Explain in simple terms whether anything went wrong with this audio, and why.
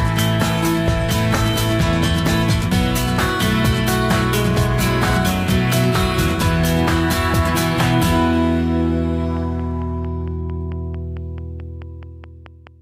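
From 9.37 s to 12.68 s a train of clicks runs over the audio: about fifteen sharp ticks, evenly spaced at roughly 4.5 per second, each about as loud as the sound itself and much the same shape. Because they keep the same steady pace whether or not anything else is playing, they are not part of the recording. They are likely electrical interference from nearby equipment or a faulty connection or power supply.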